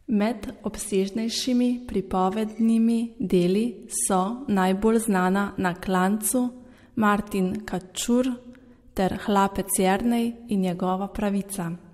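No technical faults can be heard anywhere in this recording.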